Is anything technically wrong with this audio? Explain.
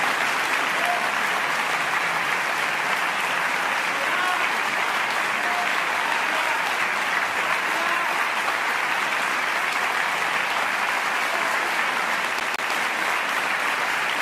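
Yes. From 12.40 to 12.72 s the audio shows a CD stuck on one turn. A scratch knocks the laser back one track each time the disc comes round to the same point, so a loop of about 159 ms plays twice in succession, each jump marked by a brief mute. The result is a quick, evenly spaced stutter of the same fragment, the characteristic sound of a skipping CD.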